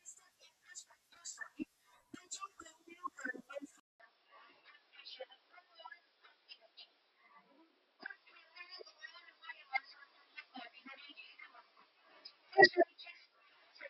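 Speech that turns dull and boxy at 3.80 s, after a gap of about 200 ms, and stays that way to the end. From that point nothing comes through above 5.5 kHz, and a faint new background noise sits roughly 35 dB below the speech, though the overall level barely changes. The brief dropout, the sudden band limit and the different noise floor point to the likely cause: an input switched to a poorer device mid-recording, such as another microphone or a headset in its call profile.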